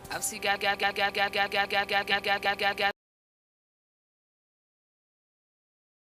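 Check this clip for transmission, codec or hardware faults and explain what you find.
Three kinds of fault are present. They overlap in the first half of the clip.

A system hang loop runs from 0.56 to 2.91 s. The system froze while the hardware kept replaying its ring buffer. A 185.76 ms slice, which fits an 8192-sample buffer, repeats 13 times at 5.38 Hz. It sounds like a machine-gun stutter. About two seconds of audio are lost.

Dropped buffers (overrun) occur at 0.83 and 2.45 s. Each is a jump in the sound, with no gap of silence. Roughly 20 ms is missing each time. The likely cause is samples overwritten before the program collected them.

Compressed frames are skipped from 2.11 to 2.14 s. About two 10 ms frames were not played, so roughly 20 ms of audio is jumped over.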